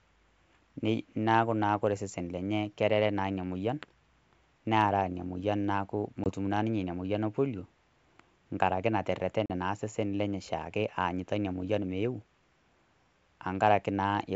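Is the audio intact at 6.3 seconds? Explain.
No, there's packet loss on an ADPCM call right around then, running from about 6.24 to 6.30 s. A 20 ms chunk of the speech, roughly a single packet's worth, drops out as a hard-edged silent hole. The G.722 decoder's adaptive predictor and step size lose sync with the sender while that packet is missing, so the speech coming back can sound off-level, clicky or a bit distorted until the decoder resettles over the next few tens of milliseconds.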